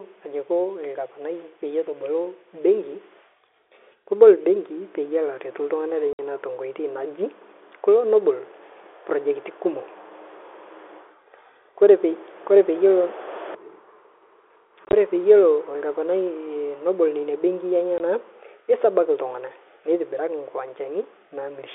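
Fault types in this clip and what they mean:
Packet loss filled with silence: at 6.13 to 6.19 s, 14.85 to 14.93 s and 17.98 to 18.00 s, the speech drops out into dead silence because missing packets were replaced with nothing. The gaps are 60 ms, 50 ms scattered in pieces across 80 ms with the longest run 20 ms, and 20 ms. All are multiples of 10 ms, which fits 10 ms packets. Each hole has abrupt edges.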